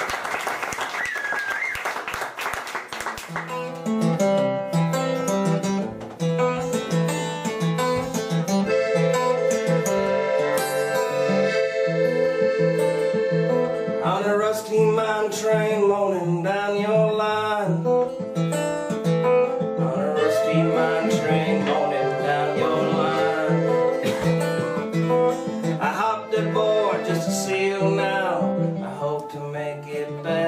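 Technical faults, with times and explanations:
8.94 to 8.97 s, compressed frames skipped: a short run of compressed frames, around two of them, never reached the output, either lost from the file or rejected by the decoder as corrupt. Each frame here spans 46.4 ms, so the audio lurches forward by roughly a tenth of a second.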